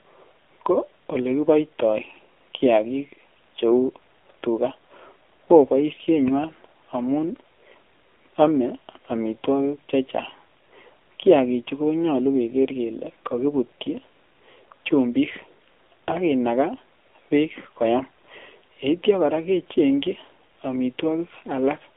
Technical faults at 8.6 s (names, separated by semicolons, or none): AMR narrowband mobile codec